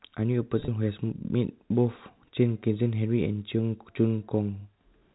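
Packet loss with pitch repetition hits between 0.6 and 0.68 s: about 60 ms of audio goes missing across that 80 ms stretch, each gap at most 30 ms, and the receiver fills each one by repeating the last pitch period. The speech briefly sounds held and buzzy, never dropping to silence.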